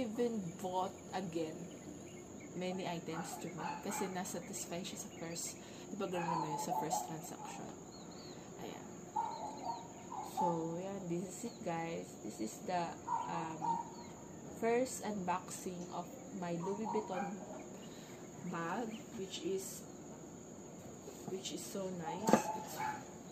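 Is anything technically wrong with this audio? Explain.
Yes. Crude rate conversion, 0 to 2.28 s: samples are simply dropped without filtering, consistent with 48 kHz to 44.1 kHz, leaving a gritty, inharmonic fizz roughly 30 dB below the sound.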